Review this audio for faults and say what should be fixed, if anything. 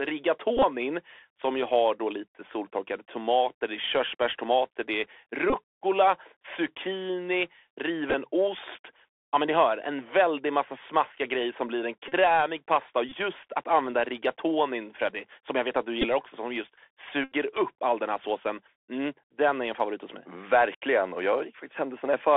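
The speech runs throughout through a Bluetooth CVSD headset codec. The band is confined to roughly 300 Hz to 3.5 kHz, and the damage is plainly audible. The sound fits a 64 kbps CVSD link, where each sample is a single up-or-down bit and the step size adapts. Fast high-frequency content outruns that step, which roughens sibilants and leaves a grainy hiss beneath the speech. To prevent it, use a wideband (mSBC or LC3) headset profile instead of the CVSD narrowband link.

Bluetooth headset packet repeats occur at 0.57–0.63 s, 5.50–5.55 s, 8.10–8.14 s, 12.08–12.14 s, 13.09–13.14 s, 16.02–16.06 s and 17.24–17.33 s. Lost voice packets are replaced by the previous packet's bits, so the 3.75 ms repetition buzzes near 267 Hz. The worst event, at 17.24 s, covers about 79 ms of lost audio. To prevent it, improve the radio link by reducing distance and 2.4 GHz interference so packets arrive intact.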